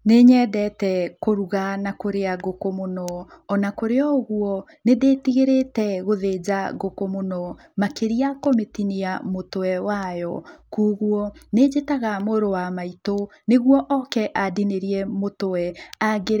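No faults are audible anywhere in the speech recording.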